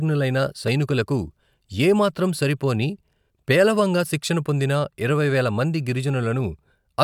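No technical faults can be heard anywhere in this recording of speech.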